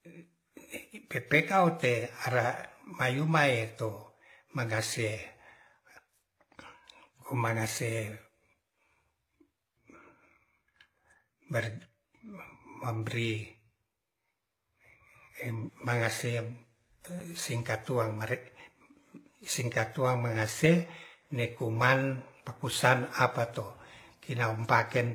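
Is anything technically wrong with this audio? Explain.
Yes, two faults run through the whole speech clip.

Nothing is present above 14.9 kHz, and the artefacts of the different codecs are heard together. That points to likely transcoding between lossy codecs, a low-rate HE-AAC encode later re-encoded as WMA.

Sample clock jitter is also present throughout. Timing errors of a couple of microseconds add hiss about 35 dB below the signal. It grows on loud, bright sounds and disappears in pauses.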